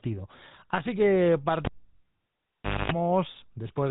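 Throughout, the speech carries the buzzy, gravelly roughness of the GSM full-rate codec. The vocal tract is modelled and driven by a sparse, regularly spaced pulse train, and the damage is plainly audible. Nothing passes above 3.8 kHz, which fits the 13 kbps full-rate coder. A plain low-pass filter would only dull the sound. Here the harshness is woven into the voicing itself, which sets it apart from simple band-limiting.

At 1.65 s a cable is pulled and plugged in. A pop opens a gap of about 1.2 s of near silence. Within it comes roughly 0.25 s of 50 Hz mains buzz while only the plug tip makes contact, and a second pop at 2.92 s brings the sound back. A dropout or mute would leave the gap clean. The paired pops and the hum burst are what mark this as a physical connector being reseated.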